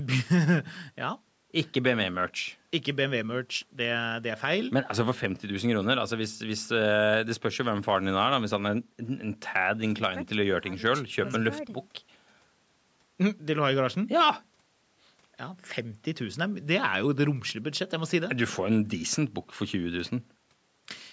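Nothing's wrong with this speech recording: it has simply been through a call's microphone processing, which trims the deepest bass and leaves nothing above 8 kHz, and that's just how call audio normally sounds.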